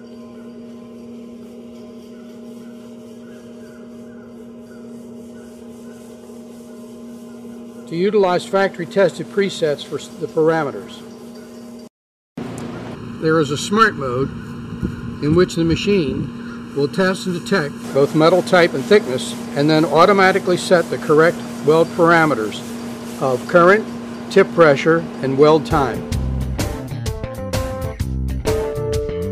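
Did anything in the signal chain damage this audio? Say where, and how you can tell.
Yes. From about 12.95 s to 17.84 s the audio turns hollow and phasey: a channel delay (comb filtering) introduced at the driver or buffer stage, where one channel falls behind the other by under a millisecond before the two are summed to mono. Content common to both channels then cancels at evenly spaced frequencies, the first notch near 700 Hz and further notches repeating above it. Unlike a phaser sweep, these notches stay fixed, and unlike a low-pass filter they leave the upper range present but carved.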